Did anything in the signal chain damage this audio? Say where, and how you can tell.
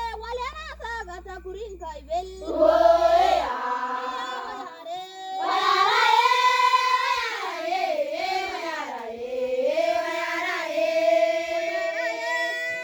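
Yes. A steady low 60 Hz tone with low harmonics sits under the sound from the start to about 3.49 s, roughly 20 dB below the signal. This mains hum comes from the analogue wiring, where a ground loop or nearby transformer couples the power line into the signal path.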